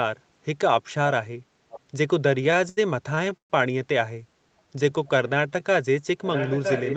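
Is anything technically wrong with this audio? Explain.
Yes. At 1.7 to 1.8 s and again from 6.24 s to the end, a delayed copy of the audio trails about 0.96 s behind, first around 20 dB down, then about 10 dB down. This echo leak likely comes from a loudspeaker on the far end whose echo canceller let its own playback slip back into the call.

From 2.35 to 2.79 s and from 3.15 to 3.52 s the sound drags and stutters, with held-over fragments lasting up to 76 ms and 129 ms. These are repeated stalls: late packets emptied the jitter buffer, and the receiver stretched the last sound until delivery resumed. Nothing is lost, but nearly half of the second stretch is filler.

From 4.48 to 5.61 s the audio runs at about 86% speed with unchanged pitch, gaining 165 ms. This jitter buffer slow-down came from repeating pitch periods to rebuild its reserve.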